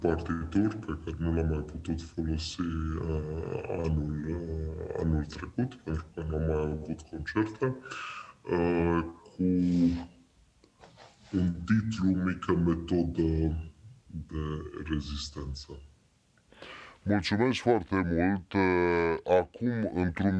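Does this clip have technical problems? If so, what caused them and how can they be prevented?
Yes. A wrong sample rate affects the whole clip. Everything runs at 0.689 times normal speed and sits 6.45 semitones low, so the sound is slow and deep. That fits 32 kHz material played at 22 kHz without conversion. Labelling files with their true rate, or resampling before playback, prevents it.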